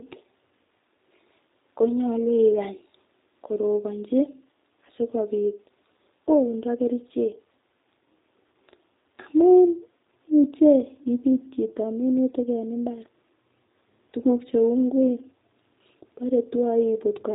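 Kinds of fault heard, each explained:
G.729 codec: The speech sounds plainly rough and slightly synthetic throughout, with nothing above 3.8 kHz. This fits the 8 kbit/s G.729 codec, which resynthesises each 10 ms frame from a vocal-tract filter, a pitch predictor and a few pulses.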